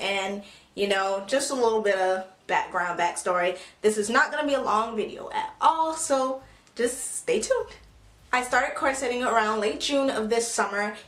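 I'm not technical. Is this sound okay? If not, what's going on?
No. For the first 2.0 seconds the sound is dull and smeared: an adaptive stream starting at a low bitrate. At 2.0 s it suddenly sharpens as the player switches to better quality.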